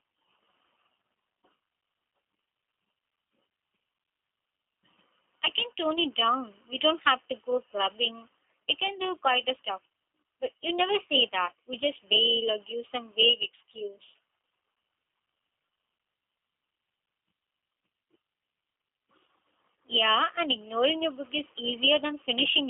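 From start to end, the speech carries plainly audible G.729 codec damage: rough, synthetic texture from the rebuilt vocal tract and pulses, narrow 250 Hz to 3.5 kHz telephone band, nothing above 3.7 kHz.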